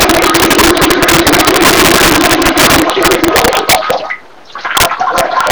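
Integer overflow runs through the whole clip: the signal is driven about 10 dB past the integer limit, and instead of being held there, each peak wraps to the opposite extreme. Around one sample in twenty crosses over, so the loudest sounds burst into violent, sharp cracks, harsher than clipping.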